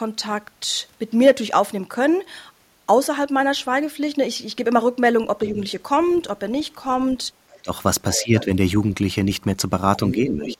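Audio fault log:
5.46–5.59 s, 7.62–8.5 s, 10.15–10.58 s, speech suppressed in double talk: the voice dips by a few dB, then about 15 dB, then about 10 dB, likely because the echo canceller ducked both sides during overlap. On a spectrogram the harmonics weaken; the waveform envelope sags.
5.48–6.2 s, 7.5–7.6 s, 8.13–8.43 s, 9.96–10.57 s, other side's voice leaking through: a second voice sits about 20, 30, 15 and 10 dB below the talker, likely echo the canceller left in. On a spectrogram a weaker, separate harmonic stack overlaps the main one.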